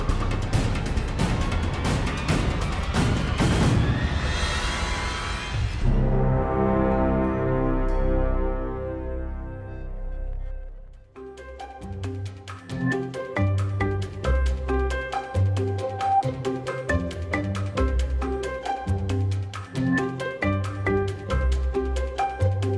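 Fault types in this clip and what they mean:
Nothing here stands out as a fault; there's no dropout, glitch or distortion to point to anywhere in the recording.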